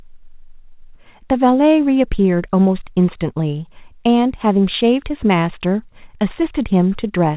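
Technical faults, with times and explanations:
The speech sits on a working call path, with nothing above 4 kHz and the even, narrowband character that fits a 64 kbps G.711 A-law telephone codec.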